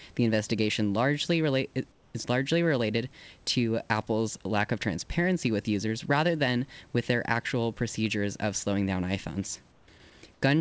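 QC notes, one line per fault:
1.92–2.14 s, 9.72–9.88 s, 10.34–10.42 s: comfort noise in place of the background. In the pauses the room hiss goes flat and featureless and drops about 3 to 5 dB, likely because discontinuous transmission stopped sending audio there.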